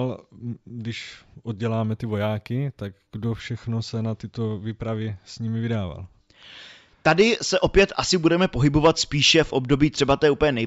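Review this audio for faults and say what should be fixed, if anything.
From 1.90 to 3.40 s, before "se na tyto výpravy", sibilants carry a faint metallic shimmer over a dulled top: imaging from linear upsampling, mirrored at 8–16 kHz. To prevent it, resample with a proper anti-imaging low-pass filter, such as a polyphase or windowed-sinc design, rather than straight-line interpolation, here apparently from 16 kHz up to 48 kHz.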